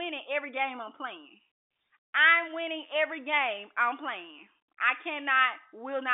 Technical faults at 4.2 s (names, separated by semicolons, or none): none